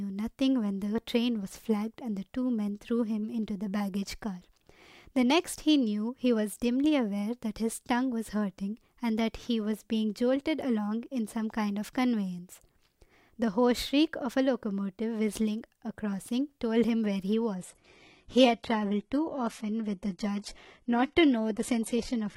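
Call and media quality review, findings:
Adaptive stream at a lower bitrate, 17.56 s to end: player drops quality suddenly with no gap, treble goes synthetic, nothing above 11.8 kHz, fits a 16 kbit/s rendition.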